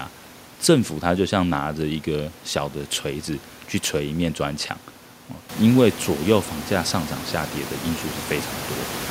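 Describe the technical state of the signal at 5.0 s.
At 5.0 s the signal is intact, with the speech carried cleanly and no dropout, distortion or other technical fault present.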